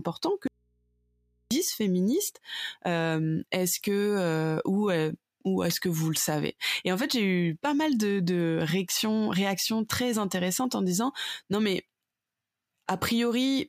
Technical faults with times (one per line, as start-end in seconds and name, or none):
0.47-1.51 audio dropout to a faint residue